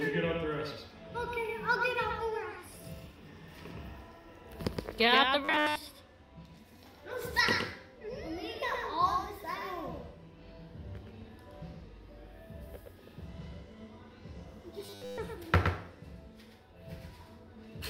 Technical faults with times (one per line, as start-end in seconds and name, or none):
0.00-17.89 doubled audio track
5.45-5.76 robotic sound from repeated short buffers
14.86-15.18 robotic sound from repeated short buffers